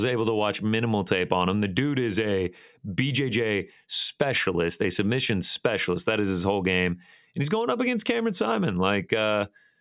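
No technical faults can be heard anywhere in the speech recording; the signal stays steady and intact throughout.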